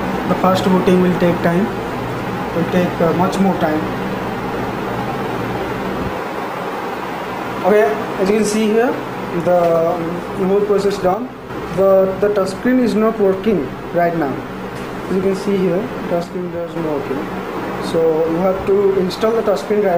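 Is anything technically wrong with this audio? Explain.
Yes. One channel drops out twice, from 11.14 to 11.50 s and from 16.24 to 16.76 s. The level falls abruptly by about 6 dB, then recovers. Likely one stereo channel went silent, halving the shared content in the mono sum.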